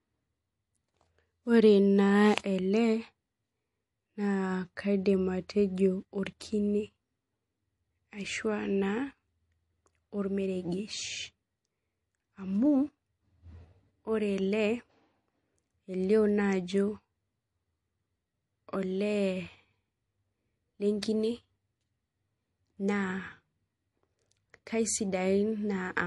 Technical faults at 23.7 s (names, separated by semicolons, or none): low-bitrate audio saved at a high bitrate